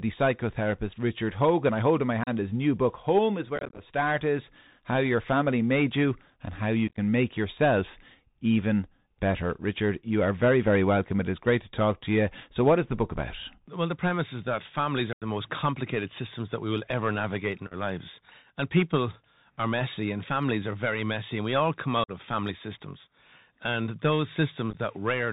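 Throughout, the speech carries the Bluetooth CVSD headset codec's signature, consistent with a 64 kbps CVSD link: nothing above 4 kHz, a granular hiss beneath the speech, scratchy s sounds, and distortion where loud high content outruns the one-bit coder's adaptive step.

Unconcealed Bluetooth headset packet loss punches abrupt holes at 2.24–2.29 s, 3.56–3.81 s, 6.88–6.98 s, 15.13–15.23 s, 17.67–17.74 s, 22.04–22.11 s and 24.71–24.77 s. Lost packets were replaced by silence or an idle pattern, leaving abrupt edges. The scattered runs at 3.56, 6.88, 17.67 and 24.71 s sound choppy and crackly, and the gap at 15.13 s is a solid 90 ms dropout.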